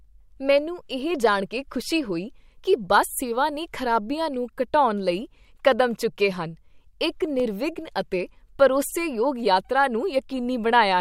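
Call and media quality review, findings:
Block of digital silence at 7.40 s, just after "ਕਡੈਮਚੁੱਕੇ ਹਨ ਇੱਕ": single tick, 0.73 ms gap. Probable component: audio output buffer not filled in time. Hard cut to zero, no fade. Unlike packet-loss concealment, which smears or repeats sound, this is heard as a tick.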